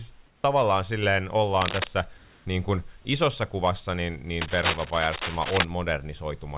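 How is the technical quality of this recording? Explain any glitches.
Two kinds of glitch affect the recording: brief patches of synthetic background during pauses, and two bursts of scratching. The speech arrives over a narrowband call path with nothing above 4 kHz, which fits a G.711 telephone codec, and a little room noise sits about 39 dB below the speech.

Comfort noise in place of the background, 0.26 to 0.44 s and 2.18 to 2.45 s: In these pauses, lasting 180 ms and 270 ms, the natural room ambience gives way to a smooth, featureless hiss. It sits at about the same level as the real background, roughly 37 dB and 31 dB below the loud passages, shifting by about 1 dB at most. This is likely discontinuous transmission: the sender went quiet when no speech was detected, and the receiver generated substitute noise.

Cable scratch noise, 1.58 to 1.87 s and 4.41 to 5.65 s: Dense, irregular crackling and rustling cut across the audio, roughly as loud as the speech itself. 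The second burst runs for over a second. The likely cause is a worn cable, connector or control being moved, so that its contact resistance jumps around rapidly and injects uneven bursts of noise into the signal.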